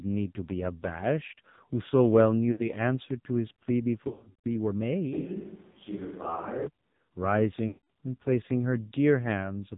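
The clip is speech carried through the AMR narrowband mobile codec. Nothing is present above 4 kHz, and the voice has the heavy buzzy, synthetic texture of a low-rate mode, which fits AMR-NB at around 5.9 kbps. The buzz and the pulse-driven graininess point to the codec itself rather than plain low-pass filtering or a low sample rate, because simple bandlimiting would muffle the sound without making it synthetic. There are three episodes of lost AMR speech frames. At 2.52–2.63 s, about 60 ms goes missing, roughly three 20 ms frames. The decoder repeats its last pitch and vocal-tract settings, which gives a brief warble and dip. From 4.08 to 4.44 s the losses are scattered over about 0.36 s, with the longest unbroken run about 0.14 s, so the sound smears and fades toward silence before returning rough. At 7.68–7.85 s, about 0.22 s is lost, which is long enough for the concealed sound to drag out and die away. 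This stretched, decaying tone is what separates frame concealment from packet-loss dropouts or clicks, which would cut to silence or repeat a chunk. From 5.14 to 6.67 s the voice abruptly turns hollow and roomy, with thinner bass and more room noise, roughly 25 dB below the speech, while the level stays about the same. This is likely a switch to a distant microphone. It changes sharply in and out instead of building up gradually the way reverb processing or a speaker walking away would.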